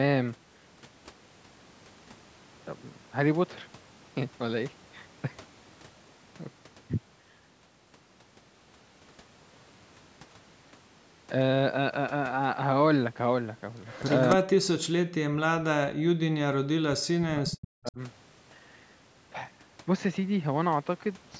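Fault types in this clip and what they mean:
Echo leak: likely a speakerphone whose echo canceller let part of the far side's voice through and back. It shows as a faint delayed copy of the speech, about 289 ms behind and well below the main voice, at 13.86 to 14.16 s and again briefly near 17.9 s.
Speech suppressed in double talk: when both sides spoke at once, the echo canceller likely could not tell the talker from the loudspeaker echo and turned everything down. The voice drops sharply, by a large amount, in pieces from 14.35 to 16.66 s and 17.08 to 17.99 s.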